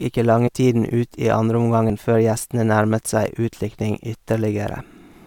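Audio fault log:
0.47 s and 1.90 s, compressed frames skipped: the speech jumps ahead by about 40 ms each time, the second just before "før gjestene nærmet". Whole coded frames never got decoded, so the audio jumps ahead by the length of the frames left out.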